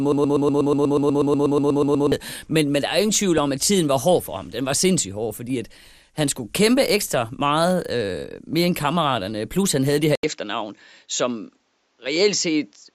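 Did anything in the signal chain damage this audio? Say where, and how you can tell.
Yes. At the codec stage, the whole speech clip is dull, with a gurgling, granular texture and upper bands flickering in and out. That is MP2 compression, likely at a low rate, which fits about 80 kbps. Too few bits left coarse quantisation and switched-off sub-bands.

At the buffer or stream stage, a broken-record loop runs from the start until 2.12 s. It is already under way when the clip opens. A 0.12 s fragment repeats exactly, back to back, sixteen times. A stalled player or stream likely kept resending its last fragment, and the real audio was lost.

In transmission, DAB burbling hits at 3.38 s, between "der er ingen tvivl" and "om at tiden var". Brief blips of noise jump out of single sub-bands. Bit errors, at a small rate, slipped past error correction into the MP2 data and corrupted a few frames.

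At the input stage, after "han havde det her", an input switched to a poorer device at 10.15 s. About 80 ms of silence marks the switch. From there to the end nothing reaches above 7.6 kHz, and a new noise floor sits about 50 dB down. The level stays roughly the same. A likely change of microphone or headset profile caused this.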